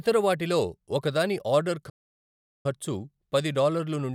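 At 1.89 s, after "వాటిలో ఒకదాని ఆర్డర్", the speech drops to silence for 0.75 s and resumes at 2.66 s. This is a playback stall, likely from the player starving for data.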